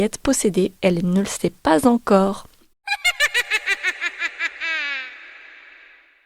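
No technical faults can be heard anywhere in this speech recording. Nothing in the sound points to an error in how it was captured, processed or delivered.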